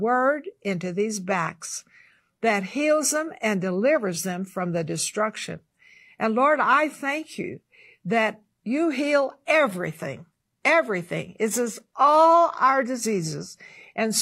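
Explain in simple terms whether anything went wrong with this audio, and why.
Adaptive stream at a lower bitrate, from 1.81 s to the end: the connection slowed, so the player switched to a smaller, more compressed version of the speech. The treble suddenly turns synthetic-sounding, with more compression artefacts, but there's no gap.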